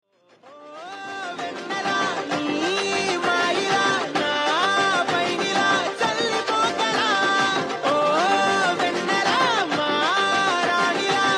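From 9.69 to 10.73 s there is channel delay (comb filtering). One channel runs late by roughly a single sample, a few hundredths of a millisecond. When the two channels are summed to mono, the shared content cancels where their phases oppose. With so small an offset, the first notch falls up near 20 kHz. So the effect is not a hollow, phasey sweep. It is a gentle dulling of the very top end for about a second.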